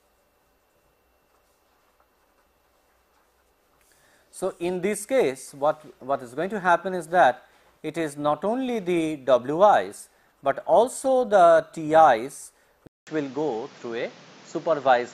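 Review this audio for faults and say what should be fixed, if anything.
Input switched to a poorer device at 12.87 s, likely: after a 200 ms silence, nothing above 7.6 kHz remains and a faint new noise floor appears. Lock the recording input to one device and disable automatic switching to headsets or call profiles during capture.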